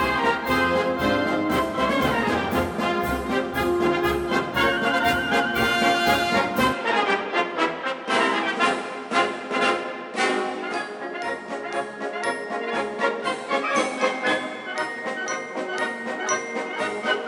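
Input switched to a poorer device at 6.73 s, lasting to the end of the clip: the sound abruptly loses its top end, with nothing left above about 10.4 kHz, so it turns duller from that moment on. There is no gap at the changeover and the level stays roughly the same, but a faint new noise floor appears, far below the signal. The likely cause is the recording input jumping to a different, narrower-band microphone or headset path.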